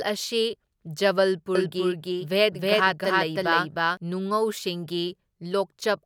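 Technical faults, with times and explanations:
1.55–3.97 s, doubled audio track: a full-band copy of the speech trails about 300 ms behind at roughly equal level, starting and stopping abruptly, likely from a second, slower capture path.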